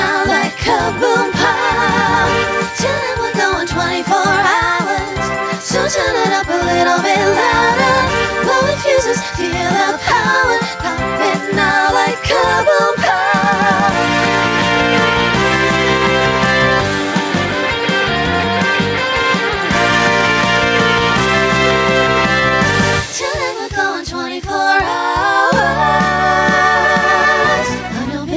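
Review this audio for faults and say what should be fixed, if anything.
Throughout the clip, the gain swings by roughly 5 dB with loud sounds: gain pumping, likely from excessive input gain driving a fast limiter. Lower the microphone gain so the limiter rarely engages.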